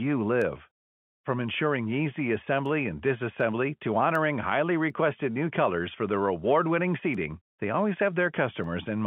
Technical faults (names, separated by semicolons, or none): word clock ticks